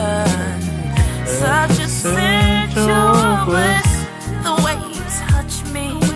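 Nothing stood out on listening to this clip.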